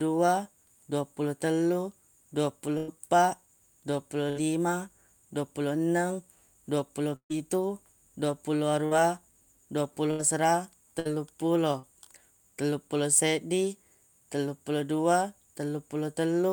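At 2.77 s a burst of packet loss begins. About 100 ms of speech is gone. The receiver extends the last sound for 104 ms and fades it, giving a held, dying buzz or hiss. Speech resumes further along. The same happens at 4.30 s, with about 60 ms missing. At 7.16 s the gap is longer, about 140 ms. Concealment stretches over it, but about 90 ms of it is silent. At 8.86 s about 60 ms is lost, and the repair adds about 19 ms, so what follows arrives slightly late. Further bursts at 10.11 s and 10.99 s remove about 80 ms and 60 ms.

At 11.79 s there is a short concealed packet loss. About 40 ms never arrived in time. The decoder continues the previous sound for 38 ms, from its pitch or as shaped noise, then blends back into the real signal. The result is a brief smear or wobble rather than a clear gap. A short sound here may be swallowed.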